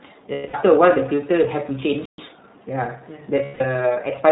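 The whole recording passes through the iLBC codec, apparently in its 30 ms frame mode at about 13.33 kbps. Nothing above 4 kHz survives, so the speech sounds narrowband. The coding damage is plainly audible as a rough, slightly synthetic edge on every syllable.

From 0.32 to 0.55 s, lost iLBC frames leave a gap of about 210 ms, which fits seven missing 30 ms frames. The decoder fills it by repeating the last pitch cycle mixed with noise, so the sound holds on a buzzy, fading vowel before clean decoding resumes almost immediately.

At 2.05 s the output falls silent for about 128 ms. This is a playback stall, likely caused by the player running dry of data or its thread being blocked. The sound then continues from where it stopped.

From 2.18 to 2.68 s the player works off that backlog with time-compressed catch-up, splicing out short pieces at 1.25 times normal speed. The speech sounds hurried but keeps its pitch.

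From 3.45 to 3.61 s, lost iLBC frames return for about 150 ms, consistent with five dropped frames. The same brief, breathy held vowel fills the gap, and normal speech recovers right after it.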